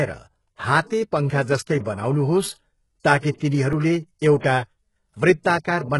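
From start to end, the speech carries heavy damage that is likely HE-AAC compression, at a rate that points to a very low bitrate, around 12 kbps. The upper band is synthesized by copying lower bands upward rather than coded, so the s sounds come out gritty and metallic while the treble still sounds bright. Its harmonics don't line up with the lower range, and nothing reaches above 11.5 kHz. Plain low-pass filtering would sound dull instead of falsely bright.

At 3.73 s there is a block of digital silence lasting about 2 ms. The output dropped to silence and returned with no fade, most likely because the buffer wasn't filled in time. Because the gap is so brief, it is heard as a tick or dip rather than an audible hole. That sets it apart from a dropout with a fade or a longer gap, where the break in the sound itself would be noticeable.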